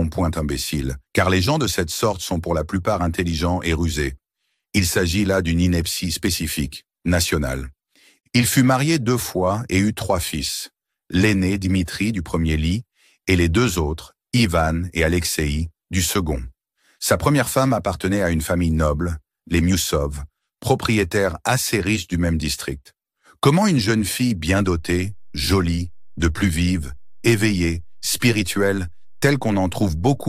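A DC step occurs at 24.59 s. The waveform's zero line suddenly shifts, by about -35 dBFS, and stays offset to the end. The jump is heard as a low thump. The sound itself continues unchanged. A converter recalibrating or an offset input being switched in causes this.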